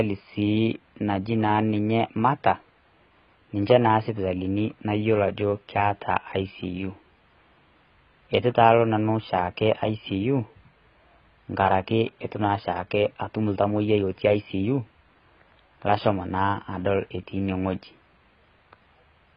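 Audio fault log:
Throughout, AAC compression: dull, smeared speech with a fizzy, warbling edge and nothing above 5.1 kHz, likely from heavy low-bitrate coding that fits about 16 kbps.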